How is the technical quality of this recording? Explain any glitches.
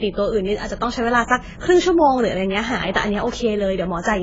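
The speech sounds dull and smeared from start to finish, with a watery, warbling texture on held sounds and a fizzy, blurred edge on sibilants. Nothing is heard above about 7.6 kHz. This is AAC compression, likely AAC-LC at a low rate, around 16 kbps. At that rate the encoder spends its bits only where the hearing model says they matter most. It cuts off the top of the band, leaves gaps in the spectrum, and quantises the remainder so coarsely that heavy artefacts surface.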